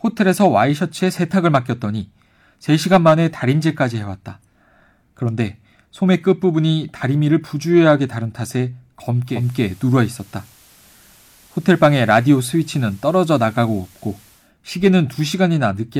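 From 9.25 s to 14.52 s a soft hiss rises under the speech and level shifts about 1 dB. This is digital radio blending to analogue: the receiver cross-faded over 238 ms to FM, then returned.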